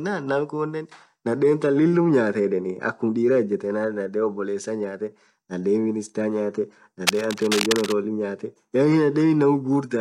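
Cable scratch noise from 7.07 to 7.94 s: dense, uneven scratching bursts sit only slightly below the speech, likely from a worn cable or connector shifting contact.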